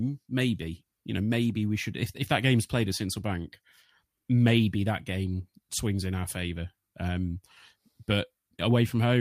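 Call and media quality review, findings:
No faults found on review of this speech clip. No action needed on the media path.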